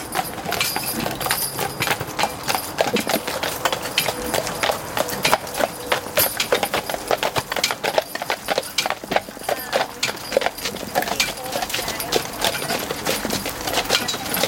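No technical faults can be heard anywhere in this audio.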